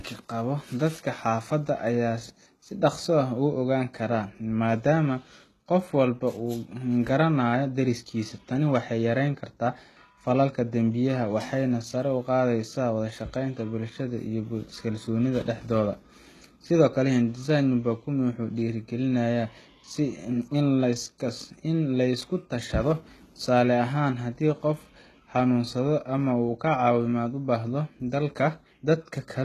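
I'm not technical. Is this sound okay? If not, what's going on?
No. The speech likely went through HE-AAC compression, which fakes the treble from copied lower sound, so s sounds turn gritty and lispy throughout.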